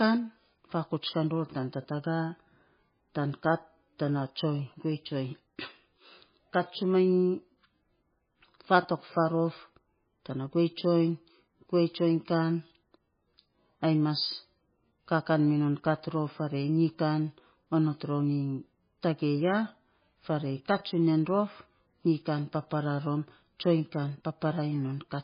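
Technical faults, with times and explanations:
Throughout, MP3 compression: the speech is dull and watery, with nothing above 5 kHz, so s sounds lose their edge. The heavy damage is likely from encoding at a very low bitrate, around 16 kbps. Starved of bits, the encoder cuts the treble and drops quieter frequency components, which flicker in and out between frames. On a spectrogram, energy stops in a flat ceiling at 5 kHz, with patchy, blocky gaps in the harmonics below it.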